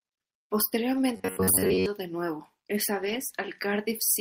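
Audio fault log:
0.93–0.99 s and 3.01–3.15 s: lost packet rebuilt from error correction. There is no gap, but about 40 ms and then 80 ms turn rough and noisy. This fits two and then four lost packets filled from low-bitrate copies. The spectrogram shows grainy frames.
1.17–1.86 s: robotic sound from repeated short buffers. The voice turns into a rigid metallic buzz near 93.8 Hz, likely from a roughly 10.7 ms buffer replayed while real audio is skipped. The spectrogram shows evenly spaced horizontal harmonic stripes, and the waveform shows one short cycle repeating.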